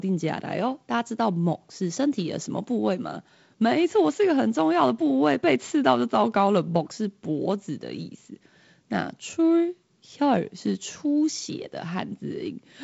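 No technical faults occur in this speech, which comes through G.722 wideband telephone coding.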